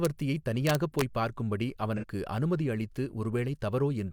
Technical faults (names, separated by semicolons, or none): integer overflow; AAC frame loss with concealment